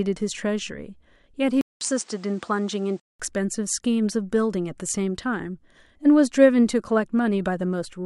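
At 1.61 s, a 0.2 s gap. Dull speech follows until 3.20 s, nothing above 9.8 kHz. Input likely switched to a poorer device.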